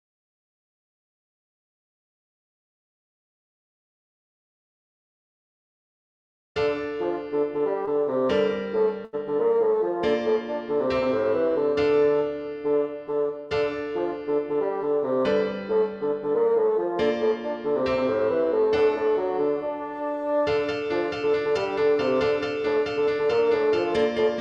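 Short concealed packet loss at 7.85 to 7.89 s: about 20 ms of audio never arrived in time, and the receiver patched roughly 15 ms by extending the preceding sound before blending back into the real signal. It is heard as a brief smear or wobble.

A burst of packet loss follows at 9.05 to 9.15 s: about 80 ms went missing in a run, and the receiver stretched the last sound across the gap while fading it down. The audio then resumes further on, with that stretch of sound gone.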